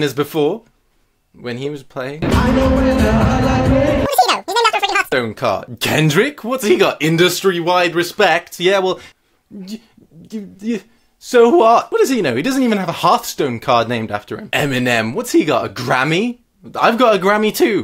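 From 4.06 s to 5.12 s the audio is read two samples at a time, so it runs at double speed. The reader took each pair of samples as a single frame. It either treated mono data as two channels or treated the samples as twice their true width. Only one sample of each pair is played, so the material passes twice as fast. Pitch rises by 12 semitones, a full octave. At 5.12 s normal speed and pitch return.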